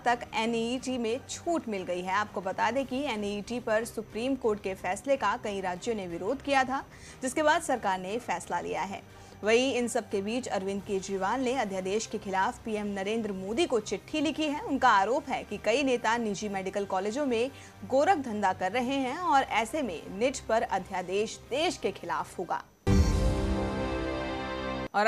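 Nothing technically wrong turns up anywhere in this audio, so there's no fault to point to here.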